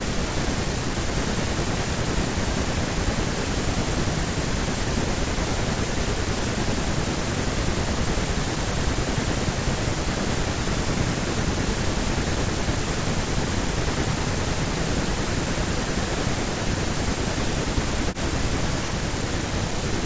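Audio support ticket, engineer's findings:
Speech suppressed in double talk, 0–0.87, 1.44–5.98, 6.56–10.32, 10.91–13.95, 14.64–16.49, 17.15–19.32 and 19.85 s to end. Near-end speech ducks by about 40 dB or drops out in pieces. Likely an echo canceller unable to separate the talker from loudspeaker echo, so it attenuates both. Waveform shows envelope collapsing in chunks. Spectrogram shows gaps across the band, which tops out at 8 kHz from call mic processing.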